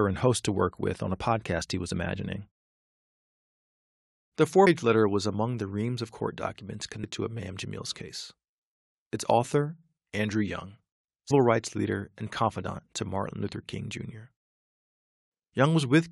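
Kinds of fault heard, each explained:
Compressed frames skipped: whole coded frames are lost, so the speech jumps ahead with a brief smeared blip at 4.66 s before "letter was among the", 7.03 s after "reams of court documents" and 11.31 s before "rights leader and confidant", dropping roughly 100 to 200 ms of several 23.2 ms frames.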